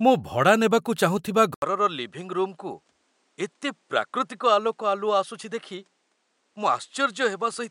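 Speech, with the input likely switched to a poorer device at 1.54 s: an 80 ms gap, then a quieter, duller waveform and a spectrogram empty above 10.5 kHz.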